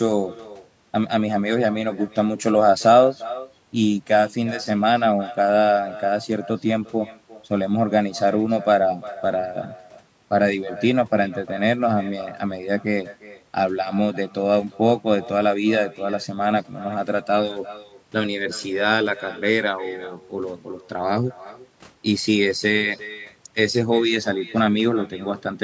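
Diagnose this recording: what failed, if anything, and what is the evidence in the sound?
Echo with no canceller, a call-processing failure at the far end, runs through the whole recording. Every phrase of speech is followed, roughly 0.4 s later, by a thinner copy about 18 dB quieter. The far side's loudspeaker feeds its microphone and nothing subtracts the returning signal, so the talker hears themselves after the network round trip. Unlike room reverberation, which smears into a continuous decay, this is a distinct delayed repeat, heard within the call's 8 kHz bandwidth.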